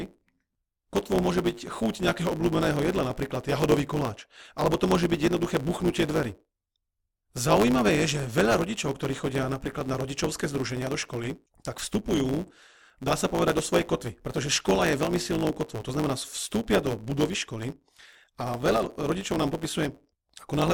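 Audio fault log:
Throughout: block size mismatch (truncated). A buzz sits at 109 Hz under the speech because each block is cut short where the next stage stops reading. The discarded tails make the speech run 1.09 times fast at roughly normal pitch. A spectrogram shows vertical striping every 9.2 ms, and the waveform shows a discontinuity at each block join.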